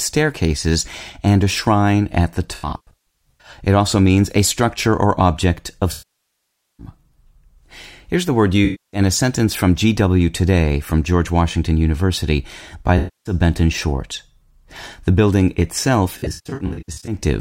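A speech clip with AAC frame loss with concealment in five places: 2.54 to 3.50 s after "a shrine at the", 5.91 to 6.86 s after "structure or object of", 8.65 to 9.00 s between "the word" and "a sentence from", 12.98 to 13.33 s, and 16.17 to 17.15 s. The decoder is patching missing frames by rebuilding the last good spectrum with scrambled phase, so the gaps sound smeared and phasey rather than silent. The first and last stretches come and go in short bursts, the longest around a tenth of a second or a little more. On a spectrogram these show as blurred, stretched-out harmonics without crisp onsets; on the waveform the envelope looks flattened and noisy instead of following syllables.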